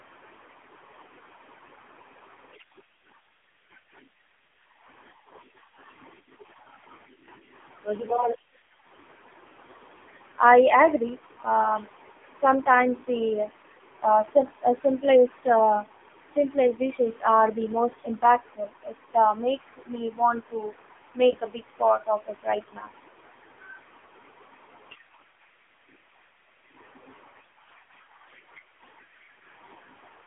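Throughout the clip, the speech has been squeezed through the AMR narrowband mobile codec at a low rate, which fits roughly 6.7 kbps. It holds a 250 Hz to 3.5 kHz line band with nothing above 3.7 kHz, so the speech sounds thin, muffled, heavily buzzy and synthetic.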